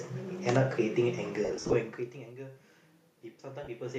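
Between 1.45 and 1.73 s, lost LE Audio frames break up the speech: about 170 ms goes missing in short runs, the longest around 50 ms. The LC3 decoder fills each gap with the last spectrum under random signs, so the speech turns into a brief noisy smear. On a spectrogram, harmonics blur into grey, evenly spread texture in blocks that fit 10 ms frames. A second 30 ms loss at 3.64 s leaves a similar short smudge.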